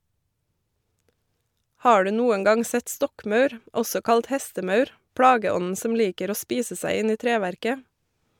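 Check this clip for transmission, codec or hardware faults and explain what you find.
Checking this clip turns up no faults to explain.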